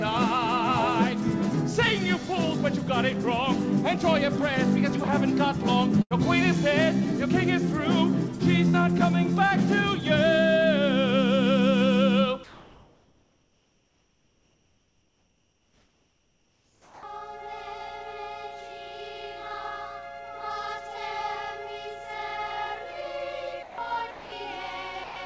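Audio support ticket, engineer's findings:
Burst of packet loss at 6.02–6.14 s and 8.69–8.79 s: consecutive packets missing, jitter buffer concealment stretches the last sound into a fading buzz or hiss, then playback resumes with about 90 ms and 60 ms gone.

Comfort noise in place of the background, 12.44–17.03 s: sender DTX likely stopped transmitting during the pause. The real background becomes steady, featureless synthetic noise, about 3 dB quieter.

Onset clipped by the voice detector at 16.77–17.03 s: VAD likely late to trigger, so the first 260 ms were replaced by comfort noise and the sound starts abruptly.

Sound dropped by the voice detector at 23.63–23.78 s, 24.11–24.32 s and 25.04–25.16 s: VAD likely misjudged quiet sound as background. Gaps of 150, 210 and 120 ms become steady noise. G.722 band limit at 8 kHz throughout.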